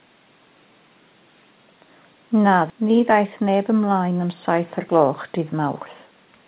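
At 2.7 s a stretch of audio was dropped, so playback makes a skip ahead: roughly 0.4 s of speech vanishes and the two sides join abruptly. From 4.79 to 6.18 s the receiver's buffer was over-full, so the jitter buffer speed-up trimmed pitch-period slices, about 100 ms in total. Speech runs about 7% faster at unchanged pitch and sounds hurried.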